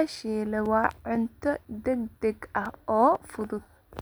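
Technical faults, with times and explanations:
0.16 to 3.66 s, periodic USB or driver dropouts: every 0.5 s a few milliseconds of speech drop to silence, as if the driver stalls, leaving steady little ticks.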